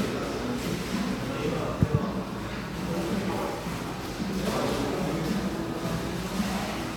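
No technical faults can be heard in this recording of everyday sounds. There is nothing in it to mark with a time or trace to a cause.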